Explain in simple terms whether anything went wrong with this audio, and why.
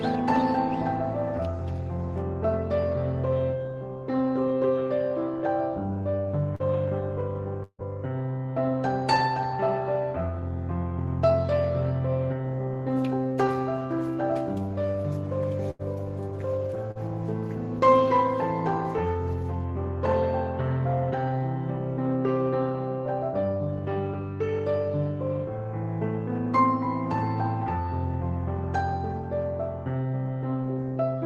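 Three kinds of network fault interrupt the sound. Short concealed packet loss appears at 6.55 to 6.62 s and 16.91 to 16.98 s. About 40 ms never arrived, and the receiver patched each hole by extending the previous sound, leaving a brief smear or wobble. At 7.63 to 7.82 s the sound stretches into a fading buzz or hiss for about 0.15 s, then goes silent briefly before resuming further on. This is likely a long network dropout. At 15.71 to 15.82 s, a burst of packet loss drops about 80 ms. The last sound is held and faded before the audio skips ahead.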